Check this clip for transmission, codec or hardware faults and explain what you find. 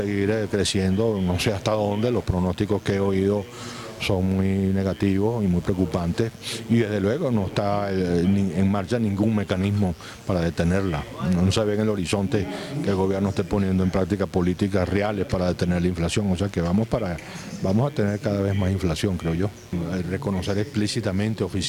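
There is one hardware fault, mains buzz, present throughout. Switching spikes from the 60 Hz supply leak into the signal path, adding a steady raspy buzz roughly 30 dB below the signal.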